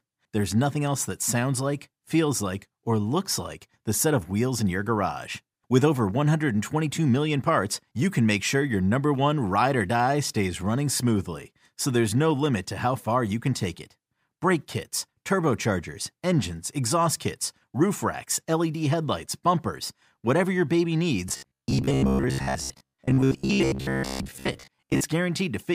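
At 1.21 s, between "nothing else that" and "sounds like feels like", lost LE Audio frames leave a gap of about 7.5 ms, which fits a single dropped LC3 frame. The decoder fills it with the previous spectrum under scrambled signs, giving a brief noisy smear.

From 21.29 s to 25.05 s, after "bumpers whatever your baby", the likely cause is new audio arriving too seldom, so the playback repeats short buffers and skips most of the real speech. The loop rate imposes a fixed 66.7 Hz robotic sound, which fits a 15 ms buffer, and the speech becomes a rigid metallic buzz.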